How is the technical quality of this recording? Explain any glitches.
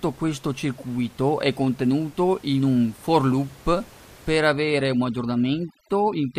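The recording has one fault: overdone noise removal from 4.39 s to the end. Noise reduction set far too aggressively cuts individual frequency bands whenever they sit near its noise estimate, taking low-level parts of the speech with them. The room noise, about 26 dB below the speech before this point, drops and breaks up into twinkling specks.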